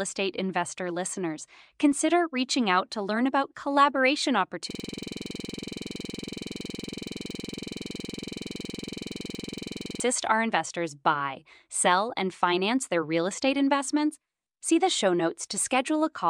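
Speech with a system hang loop from 4.71 to 10.0 s: one 46 ms slice repeats at 21.5 Hz as a rattling buzz, which fits a frozen 2048-sample ring buffer.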